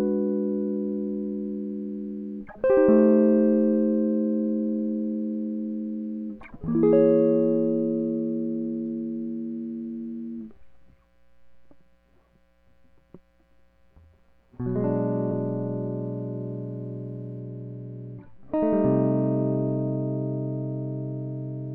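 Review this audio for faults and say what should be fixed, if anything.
At 15.30 s the music jumps forward by roughly 50 ms, a compressed frames skipped fault. About two whole frames were never played, either missing from the file or rejected by the decoder as damaged, and the jump length fits frames of about 23 ms. Because the surviving frames overlap, the join is a short smeared blip, not a sharp click. On a waveform the rhythm visibly lurches with no spike; on a spectrogram a thin vertical smear marks the seam. To prevent it, verify file integrity after transfer and use error-resilient packaging or retransmission so damaged frames are replaced, not dropped.

From 17.39 s to the end, the music turns dull and muffled because de-emphasis was applied wrongly. A treble-cut filter meant to reverse pre-emphasis acted on audio that had none, or acted a second time, leaving a smooth downward tilt of about 8 dB at 10 kHz relative to 1 kHz. 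A spectrogram shows the upper bands dimming abruptly at 17.39 s and staying faded, while the waveform looks rounder with softer transients. To prevent it, check the emphasis flag and apply de-emphasis exactly once, only where pre-emphasis was used.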